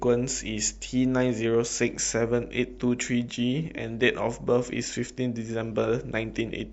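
Speech throughout, with plainly audible watery, swirly artefacts and metallic chirps on s sounds; likely MP3 compression, with damage that fits a bitrate around 64 kbps.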